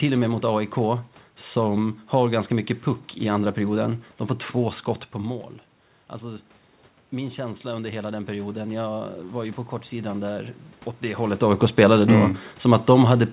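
From 7.11 to 11.31 s, automatic gain rising: after the input dropped by about 12 dB, gain crept up about 5 dB, lifting voice and room noise together, unlike a talker moving.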